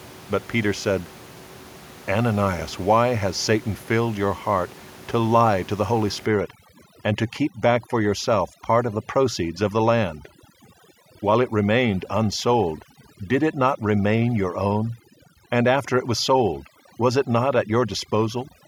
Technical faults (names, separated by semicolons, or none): overdone noise removal